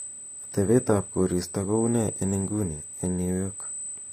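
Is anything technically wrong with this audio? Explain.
Yes, two faults run through the whole clip.

The first is USB whine. Current drawn by the USB bus in 125-microsecond microframes is leaking into the audio through the power or ground path, putting an 8 kHz repetition into the signal. This is heard as a steady, fixed-pitch whistle at 8 kHz that sits over the speech from start to finish. It is strongest at exactly 8 kHz and only around 10 dB below the speech.

The second is plainly audible codec damage, most likely from HE-AAC compression. That coder transmits only the lower spectrum and rebuilds the treble by copying lower bands upward and shaping them with a coarse envelope. The result is synthetic high end whose harmonics don't line up with the real ones, which fits a low bitrate around 24 kbps. Sibilants in the speech come out gritty and metallic, and there is nothing at all above 15.5 kHz.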